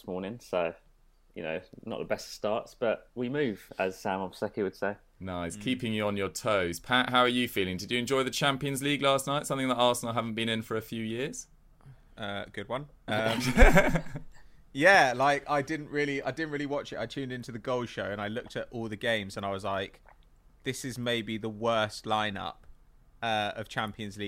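No technical faults can be heard anywhere in this clip.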